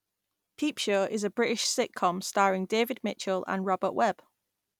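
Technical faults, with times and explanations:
No technical faults detected.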